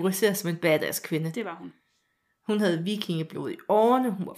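From 0.40 to 3.96 s, sharp word clock ticks recur about every half second: an unlocked receiver clock, some 40 ppm off, slips one sample.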